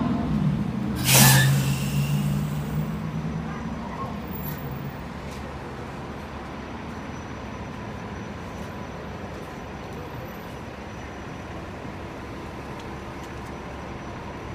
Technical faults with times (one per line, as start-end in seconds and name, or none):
none